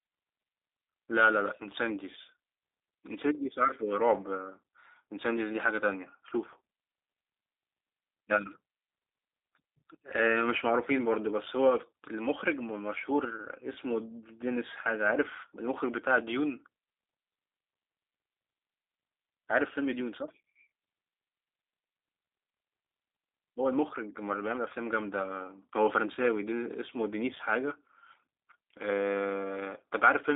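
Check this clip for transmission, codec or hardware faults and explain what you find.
A G.729 codec is on the line throughout the speech. The band sits between roughly 300 Hz and 3.7 kHz, with nothing above 3.8 kHz. G.729 rebuilds each 10 ms frame from a vocal tract filter, a pitch estimate and a few fixed pulses, and the plainly audible roughness fits an 8 kbit/s coding. A simple telephone band-limit would leave the voice dull but clean. Here the texture itself is synthetic and rough.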